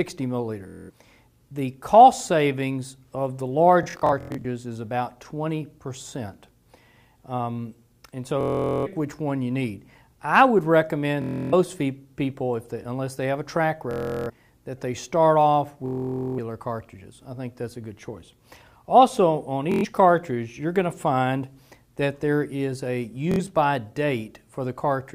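Bluetooth stutter occurs at 0.68 to 0.90, 3.83 to 4.45, 8.41 to 8.87, 11.22 to 11.54, 13.91 to 14.30, 15.86 to 16.39, 19.72 to 19.85 and 23.32 to 23.40 s. Late or lost packets make the receiver loop its last short buffer, producing a buzzing, machine-gun repeat. Playback then resumes further on, skipping between 70 and 510 ms of audio. At 3.83 s the dropouts are scattered, with the longest continuous run about 93 ms.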